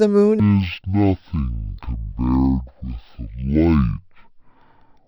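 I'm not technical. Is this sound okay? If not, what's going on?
No. From about 0.40 s to the end, the speech plays at half speed and sounds an octave lower. Everything is slow, deep and dragged out. This fault is called stereo read as mono. A stereo recording stores its left and right sides as alternating samples. Here the player treated them as one single stream. That doubles the samples, which halves the speed and drops the pitch. It also adds a faint, thin mirror-image sound higher up.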